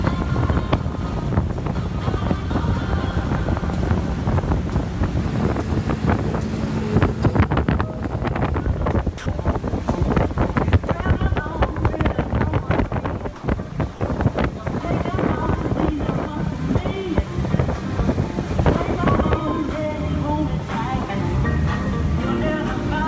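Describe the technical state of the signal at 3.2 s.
At 3.2 s the audio is intact, carried cleanly through the WebRTC call path, with nothing above 8 kHz, which fits a wideband codec such as G.722.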